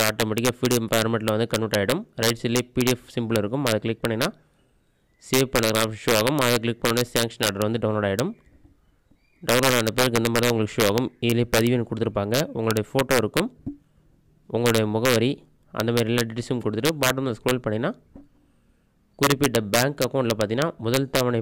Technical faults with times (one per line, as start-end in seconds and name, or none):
0.00-21.42 integer overflow